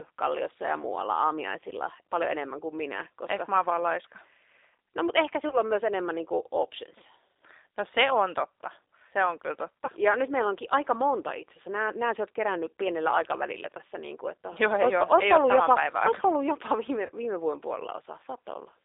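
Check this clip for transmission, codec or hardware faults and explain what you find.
Two faults are present: low-bitrate codec coding across the whole speech clip, and three brief dropouts patched over by the decoder.

G.729 codec, throughout: the speech is confined to roughly 300 Hz to 3.7 kHz and sounds slightly rough and synthetic. This fits an 8 kbit/s G.729A coder rebuilding the signal from a vocal tract filter, pitch predictor and sparse pulses. The damage is plainly audible.

VoIP packet loss concealed by the speech codec, at 5.49–5.57 s (between "mutta ehkä" and "on myös enemmän niin"), 9.85–9.89 s (after "totta se on kyllä") and 17.06–17.10 s (before "viime vuoden"): each gap fits a single lost 30 ms packet. The decoder extends its last pitch and filter state at falling gain, producing a short buzzy or noisy, fading smear. At 5.49 s the disturbance lasts about 86 ms.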